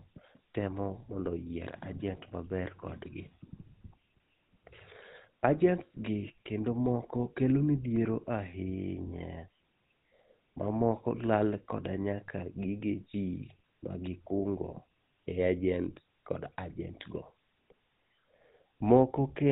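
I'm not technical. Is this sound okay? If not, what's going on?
No. The whole recording has gone through the GSM full-rate codec, an old mobile-phone encoding. Unlike an ordinary muffled phone line, it adds a gravelly, buzzy roughness.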